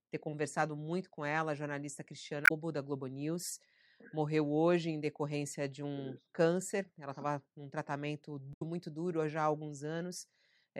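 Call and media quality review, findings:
Damaged data in compressed stream. Speech clip. Short glitches at 2.44–2.51 s after "com ela a jornalista", 6.16–6.18 s after "em decorrência de um", 8.50–8.62 s between "estava num tratamento" and "muito duro". Corrupt frames. Decoder loses sync, resyncs at the next header.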